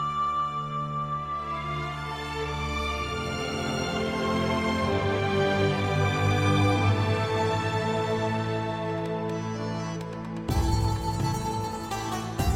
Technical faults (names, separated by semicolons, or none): none